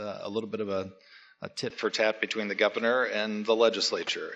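At 1.70 s the sound abruptly narrows and dulls, with nothing left above 7.6 kHz. The level shifts by a few decibels, and a new, faint background noise appears. There is no gap at the change. This is likely an input switched to a poorer device.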